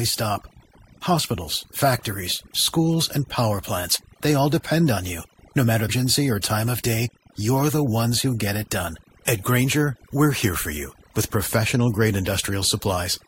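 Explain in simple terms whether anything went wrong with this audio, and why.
Overdone noise removal runs throughout the speech: the background drops and breaks up into twinkling specks, unlike simple muffling.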